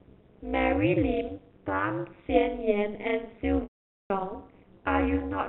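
A metallic buzz with extra tones around each note runs through the whole speech clip, with the level rising and falling about 60 dB from peak to trough at a rate of around 200 Hz. This is overlap-add ripple. The audio was split into windowed frames and reassembled with an overlap whose windows do not add up to a steady gain, so the level swells and dips once per frame.

From 3.63 s to 4.10 s the speech hangs on a buzzy, held tone that quickly fades into silence before returning through a brief cross-fade. This is packet loss with pitch repetition. About 470 ms of audio went missing, a gap that points to a run of roughly ten-millisecond packets. The receiver filled the start of it by repeating the last pitch period and faded that out, leaving the remainder empty. Throughout, the telephone coding confines the sound to below 4 kHz.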